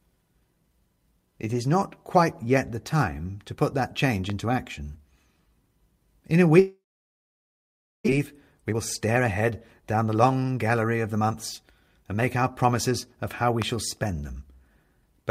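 Right after "to put that change", around 4.30 to 4.32 s, there's a loud pop: a single sharp click sitting about 10 dB above the speech, which carries straight on underneath. It sounds like a sudden voltage pulse hitting the chain, likely from a plug, switch or static discharge, shaped into a brief thump by the circuitry after it.

From 6.59 to 8.20 s there's a long network dropout. The audio stops arriving, and the receiver keeps stretching out the last sound as a buzz that fades, then falls to silence. About a second of speech never gets played, so when it comes back the missing chunk is simply gone. The likely cause is a stall in packet delivery that pushed the delay out by roughly half a second.

That extra delay gets paid back straight away. From 8.62 to 12.65 s, ending just before "of how we shall", the jitter buffer speed-up trims short pitch-period slices over and over. The speech runs at about 110% with the pitch unchanged, so it sounds a bit rushed, shedding around 0.4 s in total.

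Then, between "of how we" and "shall spend", at about 13.62 to 13.64 s, comes a second loud pop of the same kind: one sharp click about 10 dB over the speech, again pointing to an electrical pulse getting into the signal.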